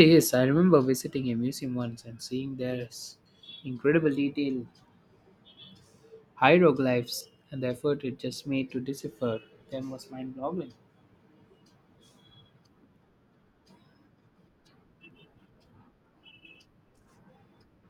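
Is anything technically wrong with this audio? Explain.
Yes. The speech skips abruptly three times, each losing roughly 50 ms: at 3.26 s between "once and seeing there's" and "incredible detail", at 7.21 s just before "and the effort it", and at 15.11 s. This is likely audio missing between chunks. The audio is handled in 4-second blocks, a sliver is dropped at each handover, and the two edges are joined directly.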